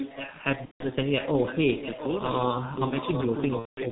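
Speech here has been carried over a heavily damaged G.723.1 codec path at about 6.3 kbit/s, whose 30 ms frames and slow-moving voice model strip the top end and smear detail, so the whole clip sounds muffled and hoarse with consonants blurred together. A loudspeaker on the far end was likely feeding its microphone past an incomplete echo canceller, an echo leak: a fainter copy of the voice, roughly 10 dB down, trails about 0.7 s behind during 0.0 to 0.41 s, 1.09 to 2.07 s, 2.31 to 2.45 s and from 2.92 s to the end. VoIP packet loss concealed by the speech codec appears twice, as the decoder extrapolated over missing audio: from 0.65 to 0.84 s (150 ms, which fits five lost 30 ms frames) and from 3.59 to 3.84 s (180 ms, which fits six). Each gap starts as a stretched, fading sound and then goes silent from the third lost frame, and the voice stays weak or distorted briefly after the gap ends.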